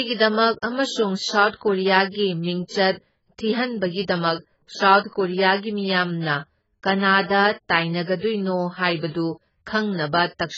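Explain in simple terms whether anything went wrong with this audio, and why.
Yes, something's off the whole way through: the speech sounds dull and a bit smeared, with nothing above about 7.6 kHz and a fizzy, warbly edge on the s sounds. That's most likely heavy AAC compression, squeezing the sound hard and throwing away detail.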